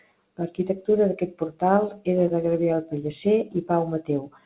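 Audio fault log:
2.28–2.32 s, short concealed packet loss: just after "d'aquest portal era", about 20 ms of speech arrived too late, so the receiver carried the previous sound forward for roughly 16 ms and blended back in. That leaves a brief smear in this 4 kHz-limited call audio.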